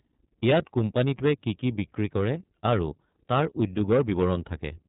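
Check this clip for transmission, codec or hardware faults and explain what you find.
The speech has been through iLBC codec coding for its whole length, and the damage is plainly audible. The band stops near 3.8 kHz, removing sibilance and air. iLBC codes each frame's excitation on its own, without carrying state from the previous frame, and the roughness here points to 30 ms frames, which fits the 13.33 kbps mode. The speech stays intelligible but sounds slightly rough and synthetic, with a muffled, telephone-like top end.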